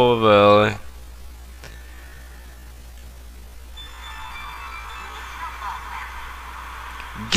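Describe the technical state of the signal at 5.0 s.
At 5.0 s you're still inside a time-stretched section running from 0.0 to 5.14 s, played at about 0.54 times normal pace. It's likely software slowing the audio to fill a length while repeating short slices to hold pitch, hence the drag.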